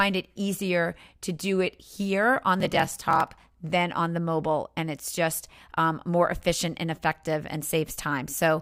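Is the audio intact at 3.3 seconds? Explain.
No. A block size mismatch with zero padding runs from 2.58 to 3.49 s: each block written, which fits 1,024 samples, is shorter than the block read, so zeros fill the remainder. This adds a 41.7 Hz buzz and slows the sound to 0.889 times its speed.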